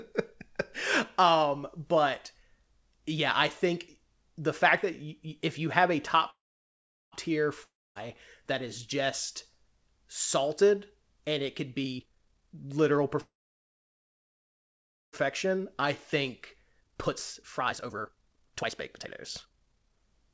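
At 6.30 s, right after "you have a", a call audio freeze stops the speech for 0.82 s. It is likely that delayed packets drained the jitter buffer. A brief fading buzz gives way to about 0.76 s of silence, and the speech then resumes exactly where it stopped, with nothing skipped.

A long network dropout follows at 7.64 to 7.97 s, ending just before "that is just". It sounds similar, with a short decaying tail and then about 0.25 s of silence. The difference is that roughly 0.32 s of speech never returns, likely because the packets were lost, so the sentence jumps ahead.

From 11.82 to 13.16 s, after "salted and it could", a jitter buffer speed-up plays the speech at 156% speed. Short pitch-period pieces, roughly 0.7 s in total, are cut out to reduce the buffered delay. The voice sounds hurried but stays at the same pitch, which sets it apart from a tape-style speed change.

A second call audio freeze runs from 13.20 to 15.15 s. 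It holds the speech for 1.92 s, about 1.83 s of which is silent, and likely comes from another packet stall. As with the first freeze, the speech picks up without loss.

The buffer then catches up with a second speed-up from 16.30 to 20.30 s, at 146%. About 2 s are trimmed, again with the pitch unchanged. Throughout the clip, the call codec leaves nothing above 8 kHz.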